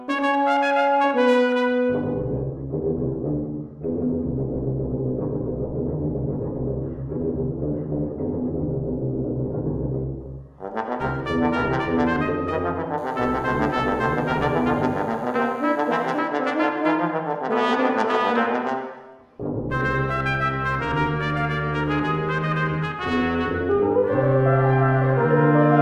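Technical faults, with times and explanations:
12.98–16.19 s, DECT cordless phone buzz: A thin, steady buzz sits under the sound, faint at about 35 dB below it. A nearby DECT handset or base sends radio bursts every 10 ms. The audio circuit rectifies them into a 100 Hz buzz rich in harmonics.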